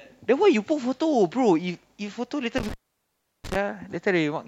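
At 2.58 s an intermittent contact fault begins. A loose connection opens for about 0.71 s. The speech drops out, with crackle at the edges and faint hiss, until 3.56 s.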